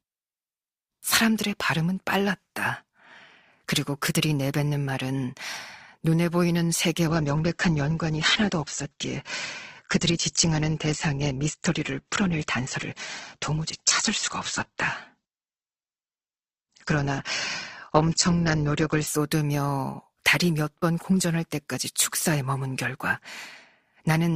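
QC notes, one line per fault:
7.07 to 19.07 s: adaptive stream at a lower bitrate. The speech switches abruptly, with no gap, to a thinner sound with nothing above 8.2 kHz. That fits a drop to roughly 12 kbit/s Opus while the connection slowed, before quality snaps back.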